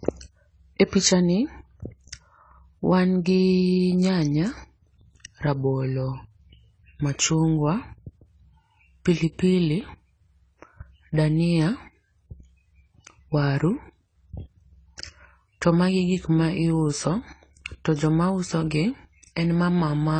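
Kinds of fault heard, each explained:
Low-bitrate audio saved at a high bitrate: the speech has nothing above 9.7 kHz throughout, a cut-off far below what a high-bitrate MP3 keeps. This likely fits a 24 kbit/s AAC encode re-saved as 256 kbit/s MP3, which cannot restore the lost band.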